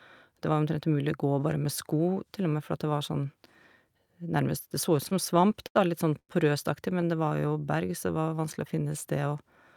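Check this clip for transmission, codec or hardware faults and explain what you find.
Three network-related faults are present, all tied to late packet delivery and jitter buffer behaviour.

From 4.97 to 5.77 s there are repeated stalls (stutter). Packets arrived late or too slowly, so the jitter buffer emptied eight times. Each gap, up to 83 ms, was bridged by extending the preceding sound, about 150 ms in all. Nothing is lost, but the speech drags and stutters.

From 6.19 to 6.31 s there is a short stall from a late packet. One packet missed its playout time, the buffer ran dry, and the receiver held the last sound for 97 ms until the packet arrived, then resumed where it left off.

From 6.93 to 8.94 s there is a jitter buffer slow-down. The buffer rebuilt its reserve by repeating single pitch periods and pause fragments, adding 234 ms. Playback runs at 89% speed with unchanged pitch, so sounds are drawn out.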